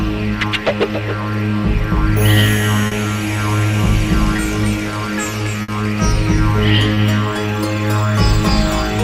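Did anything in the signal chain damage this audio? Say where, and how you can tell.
Yes, network trouble: short concealed packet loss at 2.87, 4.36 and 6.94 s, brief smears where the receiver stretched the last sound over 20 to 40 ms holes.

There's also a burst of packet loss from 5.62 to 5.70 s. About 60 ms went missing, papered over by a fading held sound before the audio jumps ahead.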